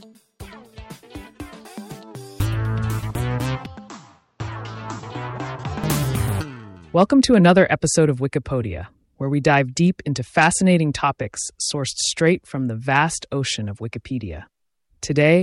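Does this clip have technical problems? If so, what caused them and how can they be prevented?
Yes. The input likely switched to a poorer device from 3.66 s to 5.84 s, with no gap. Nothing passes above 7.8 kHz there, so the sound turns dull and boxy, drops roughly 5 dB, and gains a faint new noise floor. Locking recording to one input device, with automatic switching disabled, prevents it.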